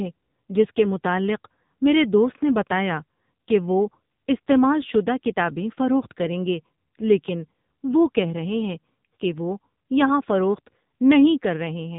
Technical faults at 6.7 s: AMR narrowband mobile codec

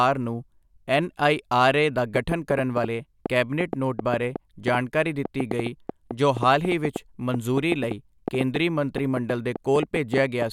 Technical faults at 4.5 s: train of clicks

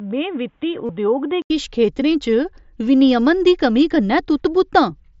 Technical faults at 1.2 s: input switched to a poorer device

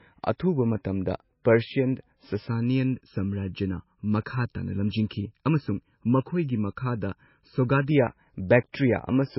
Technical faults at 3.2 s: low-bitrate audio saved at a high bitrate; channel delay (comb filtering)

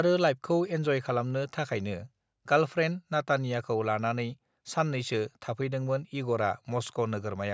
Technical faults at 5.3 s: none

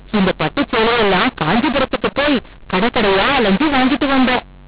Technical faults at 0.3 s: mu-law and A-law mixed up

